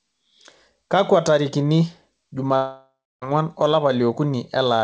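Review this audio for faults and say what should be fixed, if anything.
From 2.56 to 3.24 s a long network dropout, likely from lost packets, removes about 0.66 s of speech. The receiver stretches the last sound into a fading buzz, leaving about 0.29 s of silence before audio resumes. Forward error correction and a steadier network link would prevent it.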